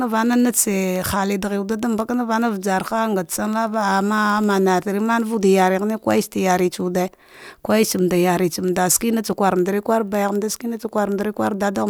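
From 0.12 to 11.89 s, word clock ticks recur about every 0.07 s: an unlocked receiver clock, roughly 300 ppm off, slips single samples, drawing thin evenly spaced vertical spectrogram lines.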